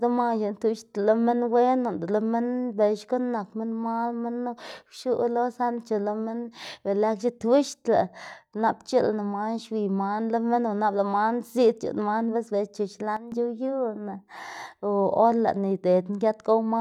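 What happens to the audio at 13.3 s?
Right after "man bis bela chu", at about 13.17 s, there's a sudden gain jump. The level drops abruptly by about 12 dB, speech and background noise together, and stays down until 13.32 s. It's likely a gain setting applied instantly, with no ramp.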